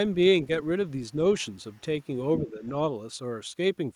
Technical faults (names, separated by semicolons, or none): other side's voice leaking through; speech suppressed in double talk